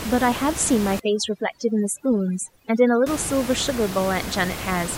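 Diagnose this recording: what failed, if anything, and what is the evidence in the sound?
Overdone noise removal in call processing, 1.00 to 3.06 s: with room noise only about 10 dB below the speech, aggressive spectral gating leaves near-silent gaps with twinkling specks.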